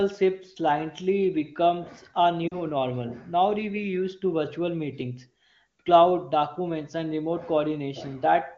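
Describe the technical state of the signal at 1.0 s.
At 1.0 s the speech is intact, carried by the AMR wideband (HD Voice) codec at 23.85 kbit/s, where any coding damage is faint at most.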